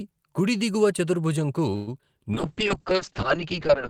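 Right after "కుడి దిగువ చతుర్భుజంకు", from 1.75 to 1.89 s, a call audio freeze stretches the last sound into a fading buzz for about 117 ms, likely from packets held up until the jitter buffer ran dry. Unlike packet loss, nothing is cut: the audio resumes exactly where it stopped, just later.

Two short concealed packet losses follow at 1.99 s and 2.01 s. About 40 ms and then 20 ms of audio never arrive, and only a sliver is filled. The result is brief smears where sound is skipped, taking back about 60 ms of the 117 ms delay the freeze had added.

From 2.34 s to the end, a call bitrate drop from 32 to 6 kbps takes hold. Opus codes more coarsely and narrows the bandwidth from 20 kHz to 8 kHz, so the sound turns muffled and watery. The change is sustained rather than a momentary glitch.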